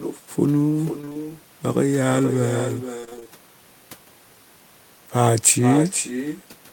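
From the start, every phrase comes back about half a second later, roughly 8 dB down, and thinner. That's echo with no canceller: the far end's loudspeaker feeds its microphone, and nothing strips the returning copy before it reaches you.

Around 1.01 to 1.17 s there's a burst of repeated packet loss, the robotic sound you'd expect. Short holes of up to about 21 ms get patched by stretching the last bit of audio, so it turns choppy with pieces missing. It happens again from 3.01 to 3.33 s, about twice as long this time, with gaps up to 26 ms.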